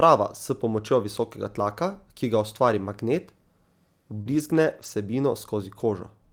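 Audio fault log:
2.29–2.31 s and 4.26–4.92 s, lost packet rebuilt from error correction: a single lost packet, then a long run of scattered losses, were replaced by the low-bitrate copies carried in the following packets. There is no gap, but the rebuilt stretches, about 20 ms and about 340 ms in total, sound rougher and noisier.
4.21–4.28 s, short concealed packet loss: about 40 ms of audio arrived too late to decode. The receiver extended the preceding sound across about 43 ms, then blended back into the real signal. The result is a brief smear or wobble just before the longer rebuilt stretch.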